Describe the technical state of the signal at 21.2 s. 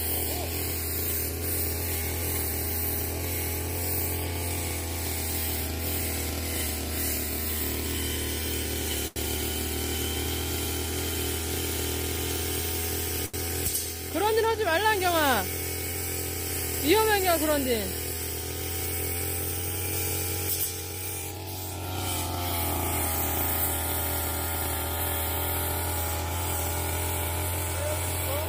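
At 21.2 s the sound is briefly hurried, running about 9% fast at unchanged pitch from 20.73 to 21.45 s. This is a jitter buffer speed-up: the receiver trimmed short pitch-period pieces in succession, around 70 ms in total, to drain excess buffered audio.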